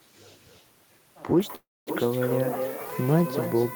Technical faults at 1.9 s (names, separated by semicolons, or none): echo with no canceller; low bit depth with noise shaping; call audio freeze